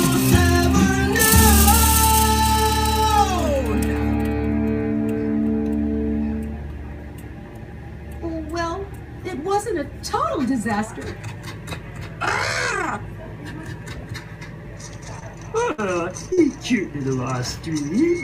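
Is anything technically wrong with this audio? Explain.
Yes, there are two packet-loss faults.

From 15.19 to 15.23 s there is short concealed packet loss: about 20 ms of audio arrived too late to decode. The receiver extended the preceding sound to fill it and then crossfaded back. On a spectrogram this shows as a brief smeared patch.

From 15.63 to 16.39 s there is repeated packet loss, heard as robotic sound. Four gaps, the longest 65 ms, remove 140 ms in total, and concealment fills about 18% of this span. The result is choppy. On a spectrogram this appears as several separate smeared blocks.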